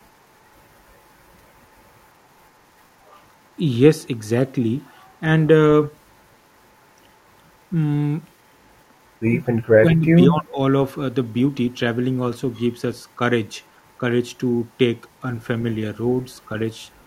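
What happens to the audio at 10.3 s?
Speech is suppressed in double talk from 9.77 to 10.58 s: patchy dips reaching about 25 dB, likely echo-canceller ducking, unlike a clean dropout.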